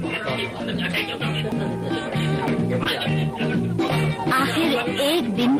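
Dropped buffers (overruns) are the likely cause of three audible skips at 1.52 s, 2.48 s and 3.88 s. At each point the sound jumps forward with no gap of silence, as though a slice had been cut out and the two ends butted together. The first two losses are a few hundredths of a second. The one at 3.88 s is closer to a tenth of a second. This happens when the program fails to read its input before the hardware writes over it. A short concealed packet loss follows from 2.83 to 2.87 s. Twenty milliseconds of audio never reached the decoder, and the decoder covered the hole with 20 ms of synthesised continuation built from the preceding sound before fading back into the real signal. It comes across as a brief smear or wobble rather than a clean cut.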